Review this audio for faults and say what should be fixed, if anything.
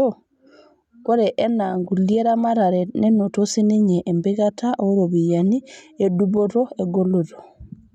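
Nothing to fix: no faults found in the speech recording, so no corrective action is needed.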